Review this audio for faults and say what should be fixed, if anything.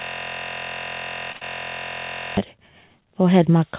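The system hang loop runs from the very start, already under way, to 2.37 s. A 23.22 ms slice, which fits a 1024-sample buffer, repeats roughly a hundred times, producing a 43 Hz buzz. On a waveform this appears as identical repeating blocks, and on a spectrogram as evenly spaced vertical stripes. Keep the audio thread from blocking so the driver never replays a stale buffer.

The short stall from a late packet occurs at 1.32 to 1.37 s. A packet arrived 26 ms late, so the receiver held the last sound for 26 ms and then resumed with nothing lost. A spectrogram shows a flat, smeared stretch. A deeper adaptive jitter buffer would absorb this delay.

The short concealed packet loss follows at 1.37 to 1.43 s. About 40 ms of audio never arrived, and the decoder filled 43 ms by extending the previous sound before blending back. This shows as a blurred patch on the spectrogram, inside a band that stops at 4 kHz. 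Forward error correction or redundancy would recover the missing packet.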